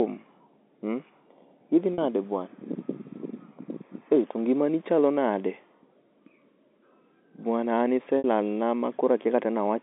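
Speech over a G.711 phone line, with two brief glitches from packet loss with pitch repetition: at 1.94 to 1.98 s and 8.18 to 8.24 s, the receiver bridges roughly 40 ms and then 60 ms by looping the last pitch period, so you hear a short buzzy hold.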